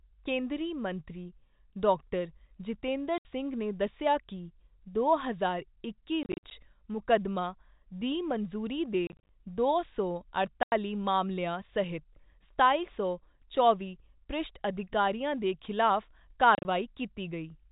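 Packets are dropping out of the stream and the receiver fills each gap with silence, so this packet loss filled with silence cuts hard-edged holes into the speech at 3.18–3.25 s, 6.23–6.51 s, 9.07–9.29 s, 10.63–10.72 s and 16.55–16.65 s. The first and fourth are single solid gaps of 70 and 90 ms. The others are clusters of short dropouts, no longer than 50 ms each, spread over 100 to 280 ms. The gap lengths step in 10 ms units, which fits 10 ms packets, and the holes sit within otherwise band-limited G.711 telephone audio.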